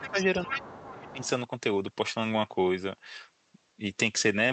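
From 0.00 to 1.29 s a second, quieter voice runs under the main talker, sitting roughly 10 dB down. This is the other side's voice leaking through, likely far-end audio from the loudspeaker that the echo canceller failed to remove. Unlike room reverberation, it is a separate, independent voice, not a smeared copy of the talker.

During that overlap the main speech itself dips: at 0.00 to 0.18 s by about 10 dB, at 0.47 to 0.56 s by a milder 5 dB or so, and at 1.13 to 1.27 s by about 10 dB again. This is speech suppressed in double talk, likely the canceller turning everything down when both sides spoke at once. These are brief, ducked dips tied to the overlap, not full dropouts of missing packets, and they are heard through the Opus call path's roughly 8 kHz audio band.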